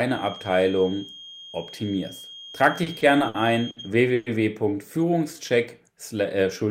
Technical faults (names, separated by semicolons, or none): feedback whistle; repeated stalls (stutter); call audio freeze; jitter buffer slow-down